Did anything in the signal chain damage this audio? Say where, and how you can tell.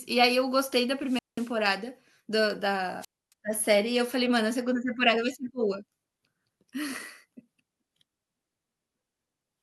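Yes. Hiss rises, then near-silence of 190 ms and 270 ms at 1.01–1.56 s and 3.00–3.33 s: wireless microphone squelch dropout, a fading radio link tripping the receiver's squelch.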